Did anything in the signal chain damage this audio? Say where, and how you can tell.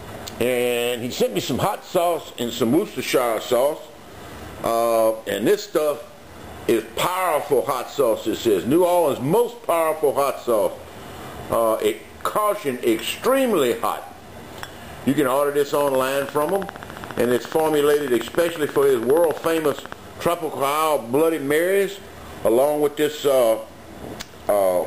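Yes. A train of clicks runs from 15.7 to 19.9 s, about 70 similar pulses at a regular 14.6 per second, peaking about 10 dB above the signal. The steady, same-shaped clicks point to periodic interference, likely from nearby equipment coupling into the analogue wiring, rather than random crackle.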